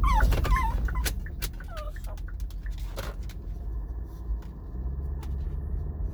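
Zipper noise runs from 0.38 to 1.74 s as the level drops by roughly 15 dB. The fade moves in unsmoothed 1 dB steps, about ten a second, and each jump leaves a small click, so a ticking zip rides on the sound.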